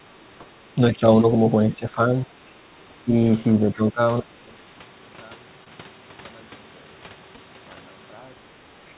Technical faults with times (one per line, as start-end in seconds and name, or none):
0.06-0.10 speech suppressed in double talk
0.39-0.44 speech suppressed in double talk
0.97-1.02 speech suppressed in double talk
1.75-1.99 speech suppressed in double talk
3.05-3.15 speech suppressed in double talk
3.50-4.01 speech suppressed in double talk
4.20-8.98 one channel inverted
5.64-5.68 short concealed packet loss
7.36-7.39 short concealed packet loss
8.88-8.94 other side's voice leaking through